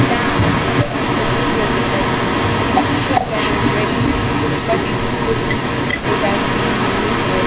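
From the start to the end of the clip, an echo leak runs under the speech: a delayed copy trails the talker by about 0.4 s, at a level roughly 5 dB above the direct speech. The likely cause is a loudspeaker at the far end whose echo canceller let its microphone pickup pass back into the call.

At 3.2 to 3.26 s the speech is suppressed in double talk. The talker drops sharply, by around 15 dB at the deepest point, for less than a tenth of a second. This fits an echo canceller that treated the overlapping talk as echo and turned both down.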